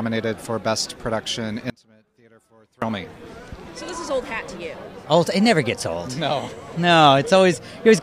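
At 1.70 s the sound drops out abruptly until 2.82 s, about 1.1 s. An audio dropout to a faint residue, likely a brief loss of the wanted signal on a live path, leaves only a faint sound roughly 30 dB down. The hard edges, rather than a taper, set it apart from a pause or fade.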